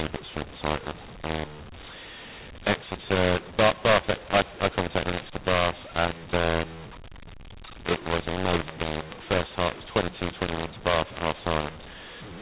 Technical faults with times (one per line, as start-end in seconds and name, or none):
0.00-12.41 mu-law and A-law mixed up